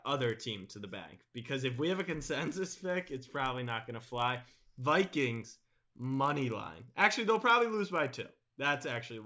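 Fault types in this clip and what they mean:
Resampler restarted on every block: converting 48 kHz to 16 kHz block by block leaves an error at each 20 ms edge, heard as a 50 Hz buzz under the speech.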